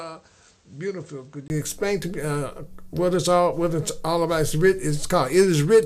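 From 0.0 to 1.5 s the sound is dull and boxy, with nothing above 8.3 kHz. It is noticeably quieter and carries its own faint background noise. A 20 ms gap at 1.5 s comes before the fuller sound. The likely cause is an input switched to a poorer device.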